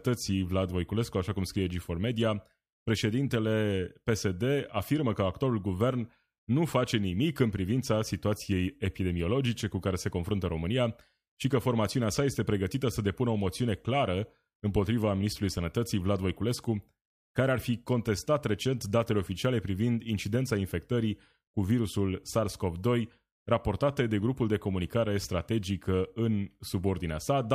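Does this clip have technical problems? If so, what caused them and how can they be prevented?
No, the speech signal comes through without any audible technical problems, so there is nothing here that needs preventing.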